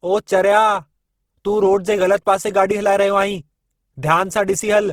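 Opus compression is plainly audible throughout the speech. The sound turns grainy, rough and noisy rather than swirly. The bandwidth stays full, reaching about 20.3 kHz. The likely cause is Opus music mode at roughly 16 kbps, filling starved bands with noise.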